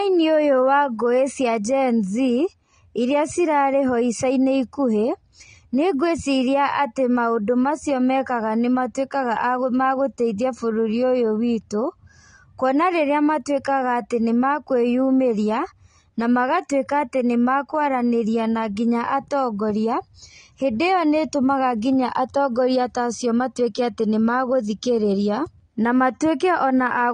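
From start to end the speech stops dead at 9.6 kHz: a spectrogram shows a flat ceiling with empty black above it, and the sound is dull. This is likely low-bitrate audio saved at a high bitrate, the high-rate MP3 keeping the earlier encode's losses.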